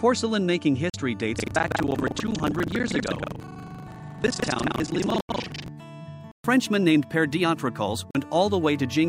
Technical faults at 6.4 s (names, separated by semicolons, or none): block of digital silence